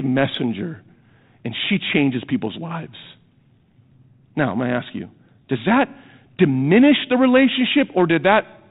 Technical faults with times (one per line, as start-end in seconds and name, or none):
none